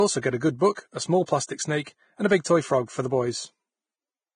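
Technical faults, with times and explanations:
throughout: Vorbis compression. The speech sounds hissy and grainy, with rough, smeared consonants and nothing above 9.7 kHz. The likely cause is heavy Vorbis coding, which fits a bitrate of around 22 kbps. Treble detail is quantised so coarsely that it turns into noise of similar energy. A spectrogram shows a hard ceiling at 9.7 kHz and speckled, blotchy upper bands in place of smooth harmonic structure.
0.75–0.77, 1.26–1.28, 1.83–1.87 and 2.44 s: pre-echo. Each sharp onset is preceded by a short hiss lasting 21, 23, 35 and 17 ms, and the attack itself sounds softened. The codec spreads the quantisation noise meant for the loud onset across its whole transform block, so that noise fills the quiet moment just before it. A waveform shows a low noisy smear ahead of each attack. A spectrogram shows a broadband haze leading each onset.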